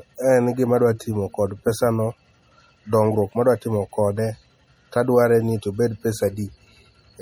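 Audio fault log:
Throughout, MP3 compression damage is plainly audible. The speech sounds watery and swirly as weak frequency lines switch on and off between frames. The treble is cut off and attacks smear. The likely cause is MP3 encoding at a low bitrate, around 48 kbps.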